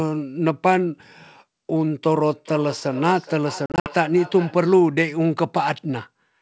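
From 2.23 to 4.8 s there is feedback echo between two devices. Speech returns roughly every 0.4 s, thinner each pass, peaking about 17 dB below the speech. Another device's loudspeaker feeds its microphone.

Between 3.66 and 3.9 s comes packet loss on an ADPCM call. About 140 ms goes silent in hard-edged gaps. The longest gap is 60 ms, which points to several lost packets. Slight distortion follows as the decoder's predictor resynchronises.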